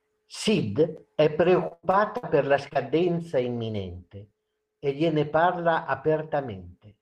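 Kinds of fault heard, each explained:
Repeated packet loss (robotic sound): From 1.67 to 2.25 s the speech breaks up. Audio went missing four separate times in that half second. Each hole was covered by stretching out the sound just before it. The longest hole lasts about 97 ms. In all, about 0.22 s is patched, over a third of the stretch. The quick run of patches gives a choppy texture with pieces of speech gone.
Short concealed packet loss: Two brief dropouts follow back to back, at 2.69 to 2.73 s and 2.73 to 2.77 s. Each loses about 20 ms of audio. The receiver covers each hole by carrying on the previous sound, then blends back into the real signal. The patches last about 24 ms and 18 ms. Together they are heard as a short smear or wobble, not a clean gap.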